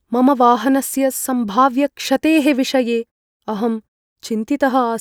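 No technical faults can be heard in this speech recording; the output fades to silence in longer pauses and returns in time for the next sound, with no distortion or timing errors.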